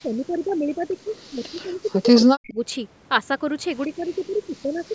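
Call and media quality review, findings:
Speech suppressed in double talk, 0.02–2.6 s and 3.86 s to end. Near-end speech dips and breaks up, about 35 dB down at worst, then about 25 dB. Likely echo canceller mistaking local talker for loudspeaker echo and attenuating both.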